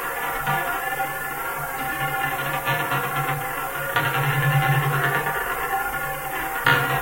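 From start to finish, the audio carries low bit depth with noise shaping. The samples hold only 7 bits, so each value is rounded coarsely. That rounding error is fed back and pushed toward the high frequencies, away from the middle of the band. The result is a steady, thin hiss that climbs sharply toward the top end. It never stops. It sits only a little below the sound itself, so it stays plainly audible throughout.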